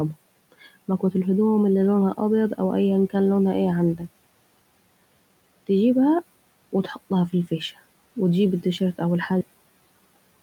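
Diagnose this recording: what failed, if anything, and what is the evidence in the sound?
The call-processing noise suppressor misjudged part of the speech as background. Right after "إيان كان لونها ايه", from 3.95 to 4.08 s, the level sinks by up to about 12 dB for around a seventh of a second, so that stretch sounds swallowed and faint.

At the buffer and storage stage, the final buffers were never written out, producing a cut-off end. Just after "و تجيب التيشرت أو", the sound stops mid-syllable at 9.41 s and falls straight to digital silence, with no decay or trailing room noise.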